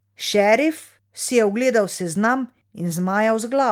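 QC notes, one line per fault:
No faults heard anywhere in this speech recording.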